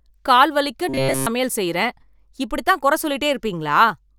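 Right after "கால் வலிக்க", from 0.89 to 1.27 s, the speech collapses into robotic sound from repeated short buffers: a rigid, metallic buzz at 134 Hz. That likely comes from a starved stream looping a roughly 7.5 ms chunk throughout, until "செய்யறேன் இப்படித்தான் குறை" returns.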